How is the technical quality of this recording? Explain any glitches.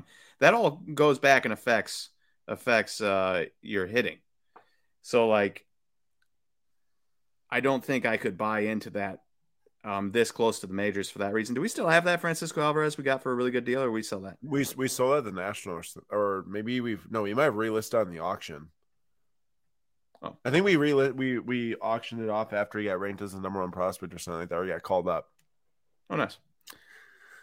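The recording has no technical glitches to explain. The speech is heard without any interruption or disturbance in the signal.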